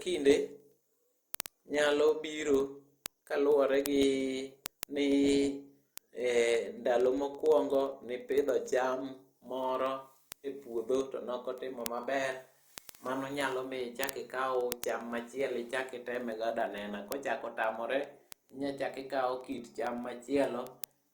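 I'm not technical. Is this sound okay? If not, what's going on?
No. Word clock ticks run from 0.14 s to 21.12 s: hundreds of sharp clicks of uneven strength, about twenty per second, behind the speech. Two digital devices were each keeping their own time, and every time they slipped apart, a sample was lost or repeated.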